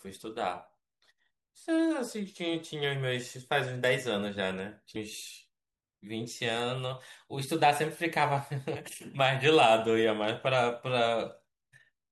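Damaged data in a compressed stream appears at 4.95 s and again at 8.75 s, each a blip only about 12 to 14 ms long that cuts into the speech. At both points a stretch of the encoded stream was corrupted. The decoder misread those frames, lost its place in the bitstream and had to hunt for the next valid frame header before resuming, leaving a short glitch where clean decoded audio should be.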